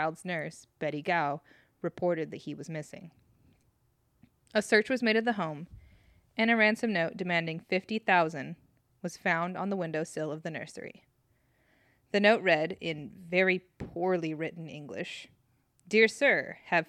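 The speech signal carries no audible technical faults at any point.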